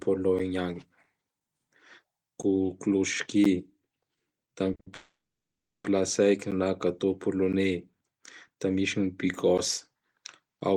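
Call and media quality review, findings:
Periodic USB or driver dropouts, 0.39–10.76 s: brief silent gaps every 1.02 s, ticks over speech. Driver/USB blocking. Waveform shows evenly spaced notches; spectrogram, vertical broadband lines.

Short stalls from a late packet, 4.75 and 4.80–4.87 s: sound held 40 then 60 ms, slight buzz or dip, nothing lost. Jitter buffer underrun. Spectrogram shows frozen, smeared harmonics.

Call audio freeze, 4.94–5.85 s: 0.9 s hold, buzz or hiss fading into about 0.7 s silence, resumes without loss. Likely network delay emptying the jitter buffer. Waveform shows decaying tail, then a flat gap.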